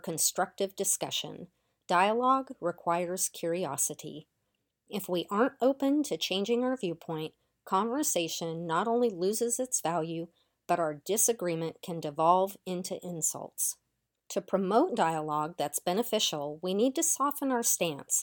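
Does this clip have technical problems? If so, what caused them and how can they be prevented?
No, nothing in this speech clip points to a technical fault, so there is no cause to trace and nothing to prevent.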